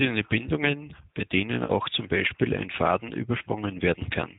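Throughout the speech, plainly audible G.729 codec damage cuts everything above 4 kHz and leaves a rough, synthetic grain rather than simple muffling, which fits an 8 kbit/s G.729A stream. From 1.65 to 1.72 s, just after "bei denen", VoIP packet loss concealed by the speech codec stretches the last sound into a buzzy tone or coloured noise that fades, instead of a silent gap. That fits about 40 ms missing, likely two lost packets, followed by weak or distorted audio while the decoder recovers.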